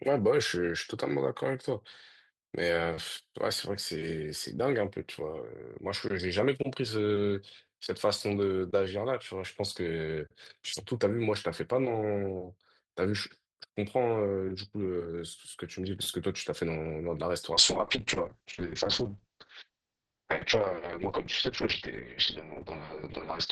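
A call bitrate drop hits this speech clip from 17.54 s to the end. The encoder falls from 32 to 6 kbps, turning the sound coarse and watery, with bandwidth narrowing from 20 kHz to 8 kHz.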